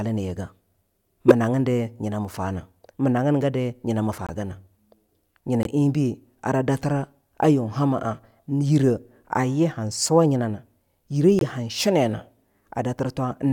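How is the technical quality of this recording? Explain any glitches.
The recording has some damage in the compressed stream: one burst of garbage early on and three short dropouts later.

At about 1.28 to 1.32 s there's a corrupt frame decoded. Flipped bits scrambled the gain and spectral codes, but the decoder played the data anyway, so energy landed at the wrong frequencies. It comes out as a loud burst, peaking only about 5 dB below full scale. The 36 ms length fits roughly two frames' worth.

The other three are corrupt frame muted events: at 4.27 to 4.30 s, 5.63 to 5.67 s, and 11.39 to 11.43 s. Here the decoder rejected the damaged frames and the player dropped silence in their place. The speech cuts out abruptly for 34 to 40 ms, then carries on with its timing intact. The short gaps fit a single frame, and the longer one at 5.63 s fits two.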